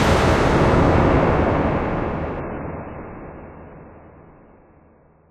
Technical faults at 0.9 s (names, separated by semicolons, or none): none